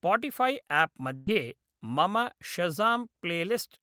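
At 1.15 s the speech hits a burst of packet loss lasting until about 1.30 s. Several packets in a row never arrived in time to play. The receiver covered the hole by stretching the last sound it had for about 111 ms, turning it down as it went. There is no silence at all. The speech then picks up further along, with about 120 ms of the original missing.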